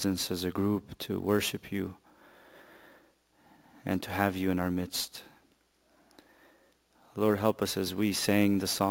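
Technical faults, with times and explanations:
Throughout: imaging from sample-and-hold upsampling. A bright, metallic fizz sits about 17 dB below the sound, filling the 8 to 16 kHz band and swelling and fading with it. This fits audio at 16 kHz raised to 44.1 kHz by repeating each sample with no smoothing filter. Mirror copies of the spectrum form around 16 kHz and its multiples, so the lowest copy moves opposite to the pitch.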